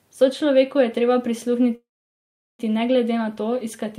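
At 1.75 s the speech stops and a brief fading buzz or hiss gives way to about 0.75 s of silence, with speech resuming at 2.61 s exactly where it left off and nothing lost. This call audio freeze likely comes from delayed packets draining the jitter buffer, inserting a gap of roughly 0.84 s.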